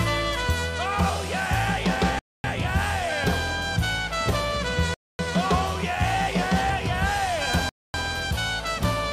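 Audio delivered in 2.5-second chunks had 250 ms of silence inserted at each join, giving hard-edged holes at 2.19–2.44 s, 4.94–5.19 s and 7.69–7.94 s: a gap between chunks.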